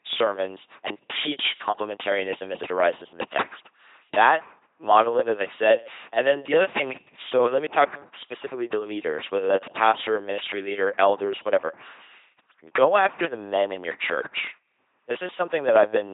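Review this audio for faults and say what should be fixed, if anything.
Throughout, the speech was passed through an LPC-10 vocoder, consistent with a 2.4 kbit/s link. Each instant is rebuilt from a buzz or noise source through a ten-pole filter, leaving a heavily mechanical, robotic voice with nothing above 3.8 kHz. To prevent this, carry the speech over a modern wideband codec at an adequate bitrate instead of this legacy vocoder.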